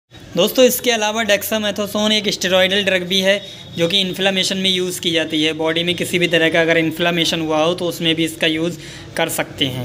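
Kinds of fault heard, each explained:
No technical faults can be heard in this audio.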